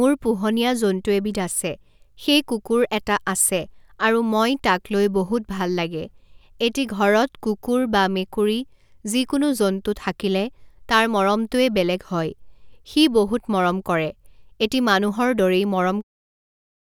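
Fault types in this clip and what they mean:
Nothing to flag here: the speech comes through without any faults, and the gentle fade-out around 16 s is just an ordinary editing touch.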